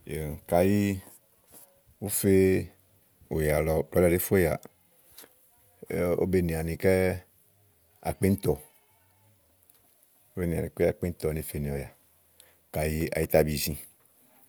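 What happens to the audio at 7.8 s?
Nothing goes wrong at 7.8 s; the speech carries on intact there, with no dropout, click, glitch or other fault at that point.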